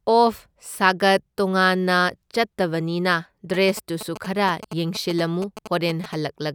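From 3.54 s to 6.15 s, a galloping dit-dit-dit pattern of short buzzes cuts across the speech, sitting roughly 10 dB below it. These are GSM signalling bursts. A nearby 2G phone is exchanging brief groups of radio bursts with the network, and the audio circuitry rectifies that RF energy into sound. The bursts repeat at 216.7 Hz, which gives the buzzes their characteristic low, harsh pitch.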